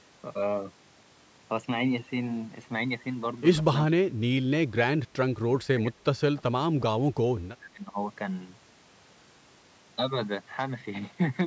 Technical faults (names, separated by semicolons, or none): speech suppressed in double talk